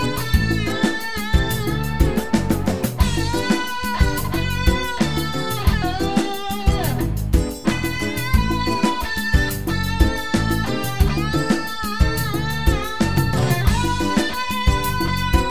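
No technical faults can be heard anywhere in the clip. There is nothing in it to time or describe.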